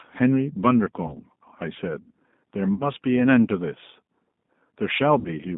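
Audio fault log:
throughout: G.729 codec. The sound is confined to about 150 Hz to 3.7 kHz and has a rough, synthetic grain from pulse-based rebuilding, unlike clean band-limiting, which fits an 8 kbit/s stream.
1.07–1.16 s, 2.74–2.90 s, 5.19–5.30 s: VoIP packet loss concealed by the speech codec. About 20, 60 and 60 ms of audio were lost. Rather than silent gaps, the decoder filled them with a fading extension of the last sound, and the sound stayed weak until it recovered.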